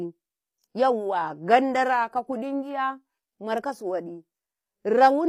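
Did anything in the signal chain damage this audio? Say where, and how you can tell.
Yes: HE-AAC compression, plainly audible throughout the speech, at the codec stage. The treble sounds rebuilt rather than recorded, so s sounds turn gritty and lispy. That is likely spectral band replication copying lower bands upward, which fits a low bitrate near 24 kbps.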